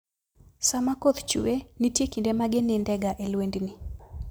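Speech recording, no technical faults detected anywhere in the clip.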